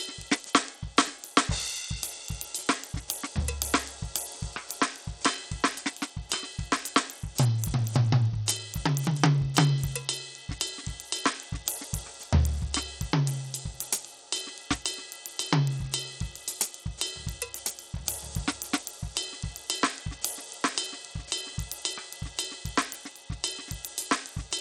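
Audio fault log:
throughout: Bluetooth SBC compression, likely behind the plainly audible damage to this music. Starved upper sub-bands make the treble flicker rather than roll off smoothly like a low-pass filter, with gritty noise and aliasing riding on top, which fits a bitrate near 80 kbps.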